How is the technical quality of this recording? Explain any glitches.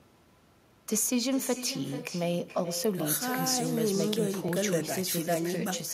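The recording has one fault throughout: echo with no canceller. The far end's loudspeaker feeds its microphone unchecked, so the speech returns around 400 ms later as a thinner copy about 11 dB quieter.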